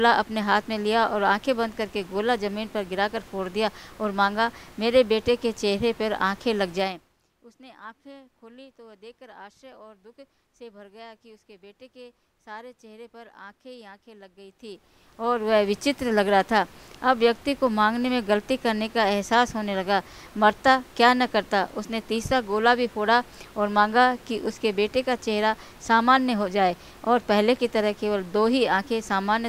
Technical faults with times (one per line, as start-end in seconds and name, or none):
6.76-7.20 zipper noise
14.40-15.60 zipper noise